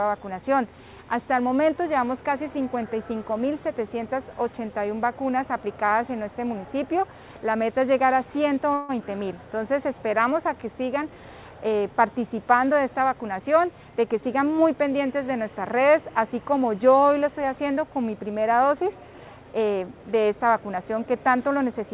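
At 8.74 s the sound stalls for about 0.15 s, until 8.91 s. The last moment is drawn out as a fading buzz rather than dropping to silence, and the audio then resumes exactly where it stopped. That points to a call audio freeze, most likely caused by delayed packets leaving the jitter buffer empty. The receiver filled the wait by extending the last sound, which inserted a gap while losing nothing.

From 13.07 s to 14.51 s the audio sounds hurried, running about 10% fast while its pitch stays unchanged. This is a jitter buffer speed-up. The buffer had built up more delay than it aims for, so the receiver trimmed it by cutting many pitch-period-length slivers in quick succession, removing around 150 ms in total. Throughout, the band stops at 4 kHz, which fits the narrowband G.711 A-law call codec.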